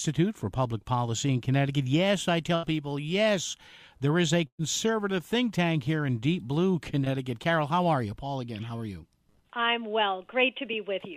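At 2.55 to 2.65 s there is a burst of packet loss. About 80 ms of audio never arrived in time. The receiver stretched the last sound for about 75 ms and faded it out. It is heard as a brief held tone or hiss. The audio then picks up further along, with that stretch gone.

A second burst of packet loss runs from 4.47 to 4.61 s. This gap is longer, about 120 ms. The stretched sound lasts roughly 116 ms and fades away completely, and about 70 ms of that is near silence before the audio returns.

At 7.05 to 7.08 s there is a short concealed packet loss. Only about 20 ms went missing. The decoder bridged it with roughly 13 ms of continued sound, then blended back in. It is heard as a tiny smear or wobble.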